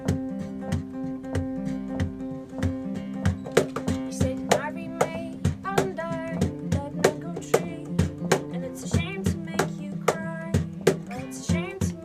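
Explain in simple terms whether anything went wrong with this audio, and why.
Nothing went wrong with this audio, because none of the problems a listener would notice can be heard anywhere in it.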